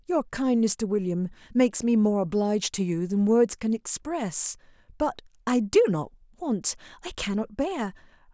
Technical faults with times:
none

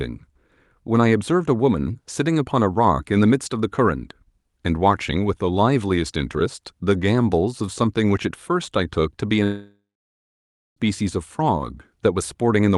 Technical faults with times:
9.43-10.78 long network dropout

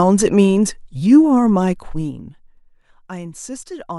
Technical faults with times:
1.69-2.58 zipper noise

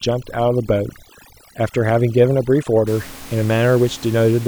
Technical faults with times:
0.00-2.87 overdone noise removal

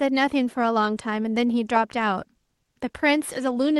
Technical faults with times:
none

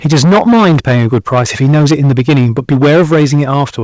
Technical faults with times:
0.05-3.63 microphone overload
0.06 microphone volume stepped down
3.14 microphone volume stepped down

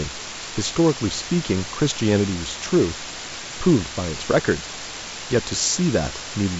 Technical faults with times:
0.00-6.59 low bit depth with dither

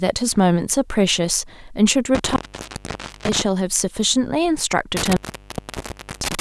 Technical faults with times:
2.15-3.42 intermittent contact
4.97-6.41 intermittent contact

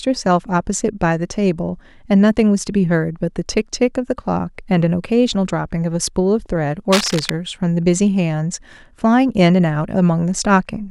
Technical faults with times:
6.92-7.33 cable scratch noise

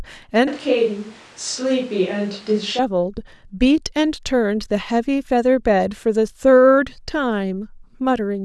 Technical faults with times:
0.48-2.79 switch to a distant microphone

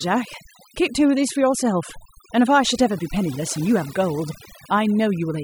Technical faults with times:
0.00-5.43 overdone noise removal

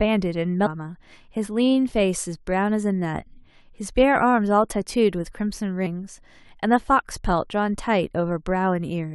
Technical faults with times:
0.65-0.67 damaged data in a compressed stream
5.85 damaged data in a compressed stream

